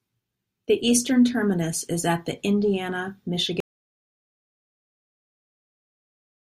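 At 3.60 s the speech stops abruptly and never returns. This is an audio dropout to silence that runs to the end of the clip. The gap is silent. No room tone or hiss remains beneath it. The likely cause is a lost input, such as a disconnected device, a failed link or an accidental mute. The recorder kept writing silence after that. Whatever was said from 3.60 s onward is gone.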